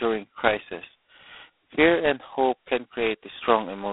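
All the way through, this speech has the sound of G.726 ADPCM at a very low rate, probably 16 kbit/s. Each sample carries only a couple of bits of difference from a running prediction, so the error lands as a harsh, rasping hiss that rides up and down with the speech level. The band is squeezed to roughly 250 Hz to 3.6 kHz, and nothing gets through above 3.8 kHz.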